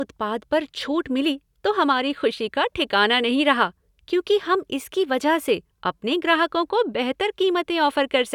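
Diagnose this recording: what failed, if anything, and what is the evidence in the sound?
Nothing failed here as far as I can hear, and the speech comes through without anything that points to trouble at any stage of the chain.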